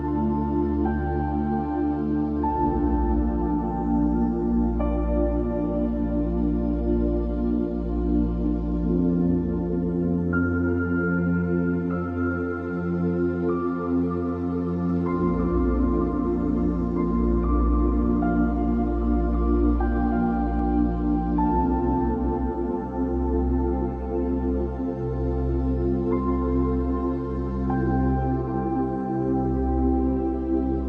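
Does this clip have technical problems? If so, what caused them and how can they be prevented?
Yes. From 14.89 to 20.59 s there is a doubled audio track. A full-band copy trails the sound by about two seconds, roughly 5 dB quieter, with no decay. It starts and stops abruptly, likely from a second, slower capture path. Monitor and disable duplicate routing before recording.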